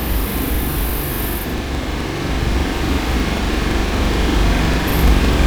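Everyday sound, and the whole thing has a planar audio read as interleaved problem. Each block of roughly 85 ms, which fits a 4096-sample block, is stored as all left then all right, but it's being read as alternating pairs. So every block plays twice at double speed, left then right. You hear everything an octave high with a flutter at about 11.7 Hz, though the overall pace still tracks correctly.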